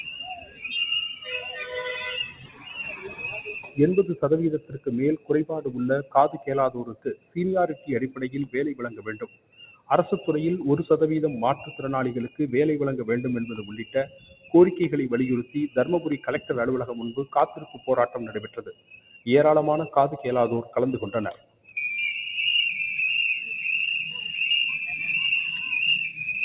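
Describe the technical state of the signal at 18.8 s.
At 18.8 s the sound falls inside a stretch of sound cut by the noise suppressor, running from 17.2 to 19.27 s. The suppressor treats this material as noise. It pulls it down by up to about 18 dB. Held parts and fading tails sink, while sharp onsets mostly survive. About one and a half seconds of this span are affected.

This sits on top of a noise suppressor applied to non-speech sound across the whole clip. A filter tuned for speech keeps mistaking steady tones and ambience for noise. Its gain swings by roughly 15 dB. The level pumps and flutters, and sustained sound thins out.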